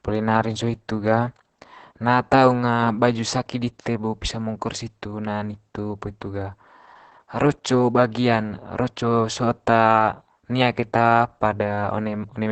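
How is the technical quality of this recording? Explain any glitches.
The technical quality is poor: heavy codec damage from low-rate voice compression runs through the whole speech clip.

Opus voice compression, throughout: the sound points to Opus in its SILK linear-prediction mode at around 10 kbps, in wideband, which keeps only the lower part of the spectrum, up to about 8 kHz. At that rate the excitation signal is quantised coarsely, so the speech comes out muffled, hoarse and slightly robotic, with a dull top end and rough, buzzy texture in the voicing.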